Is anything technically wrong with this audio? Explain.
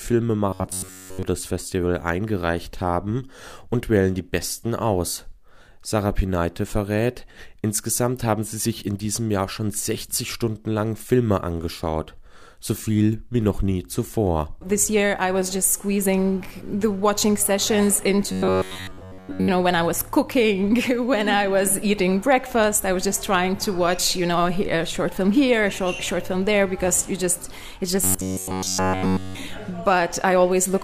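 Yes. Robotic sound from repeated short buffers occurs at 0.49 to 1.23 s, 18.32 to 19.50 s and 28.02 to 29.37 s. The audio turns into a rigid, metallic buzz at 93.8 Hz that only loosely tracks the underlying sound. The likely cause is late-arriving audio being covered by looping a segment of about 10.7 ms, which sets that pitch. Most of the first two spans is repeated material, and all of the last one is.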